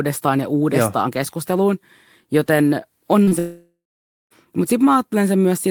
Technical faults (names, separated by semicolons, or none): short concealed packet loss; long network dropout